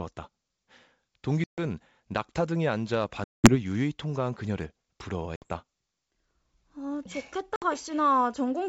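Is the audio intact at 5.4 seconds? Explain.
No. From 5.36 to 5.48 s there is packet loss on an ADPCM call: a few packets, about 60 ms, drop to a hard-edged silence. Unlike a plain dropout, the speech returns slightly distorted, because the decoder's predictor and step size have drifted from the sender's.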